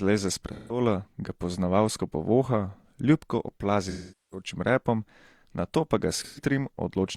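At 0.53 s, just before "ga poznavalsko povoha ljubko", about 0.17 s of speech turns smeared and noisy. This is AAC frame loss with concealment, which fits roughly four lost frames. The decoder patches the gap from the last good spectrum. A longer hole follows at 3.89 s, after that phrase and before "repom nato pa ga". Its 0.43 s patch goes phasey and fades down before the sound returns. At 6.21 s, after "repom nato pa ga", a brief 0.13 s smear recurs.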